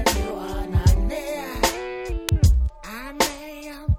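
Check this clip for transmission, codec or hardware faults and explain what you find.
There's one fault here, an electrical switching spike at about 2.29 s. It's a sharp snap sitting on top of the sound, over almost instantly and very loud. It's most likely a nearby switch, motor or static discharge throwing a brief arc that the audio line picked up as an electrical transient. That's why it reads as a hard, dry crack rather than anything belonging to the material itself.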